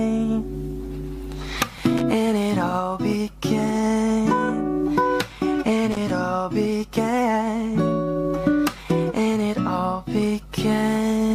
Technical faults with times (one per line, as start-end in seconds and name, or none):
1.78-2.02 loose connector crackle
5.92-6.11 loose connector crackle